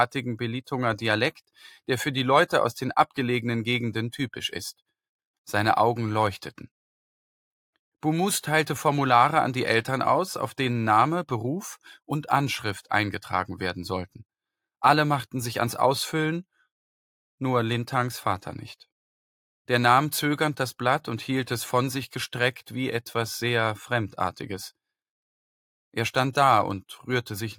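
No technical faults can be heard anywhere in the audio, with the signal keeping an intact level and continuity throughout.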